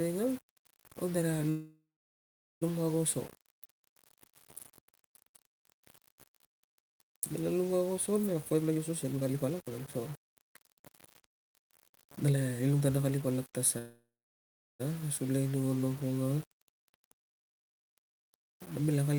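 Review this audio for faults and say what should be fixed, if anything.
The speech was likely reduced to about 6 bits by plain rounding with no dither, leaving quantization error only around 20 dB below the signal. The low bit depth without dither makes the whole clip grainy, with grit that tracks the speech and worsens on quiet passages. Keep at least 16 bits through the chain, and add dither whenever reducing word length.

From 1.49 to 2.63 s and again from 13.78 to 14.82 s there is a call audio freeze: packets were likely delayed until the jitter buffer emptied. The receiver stretched the last sound into a fading buzz before falling silent for about 0.78 s and 0.74 s. Speech then resumes where it stopped, adding roughly 1.1 s and 1.0 s of delay with nothing lost. Stabilise the network path or allow a deeper jitter buffer so late packets arrive before it runs dry.

From 8.33 to 13.60 s, jitter buffer speed-up follows the built-up delay. 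The receiver trimmed many short pitch-period slices to drain its excess, cutting about a second in total. Speech runs at about 121% speed at unchanged pitch and sounds hurried. Drain excess buffering more gradually, spreading the catch-up over a longer stretch.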